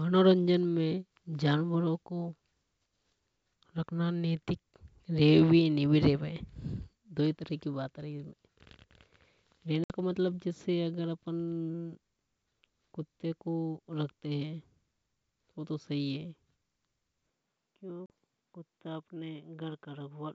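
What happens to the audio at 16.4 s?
Nothing goes wrong at 16.4 s: the speech there is intact, carried by G.722 wideband telephone coding at 64 kbit/s with nothing more than its faint upper-band hiss.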